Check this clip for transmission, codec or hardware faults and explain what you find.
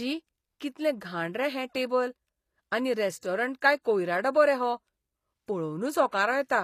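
One codec fault runs through the whole clip. HE-AAC compression, throughout: the treble is likely rebuilt by band replication at roughly 24 kbps, so s sounds turn plainly gritty and lispy.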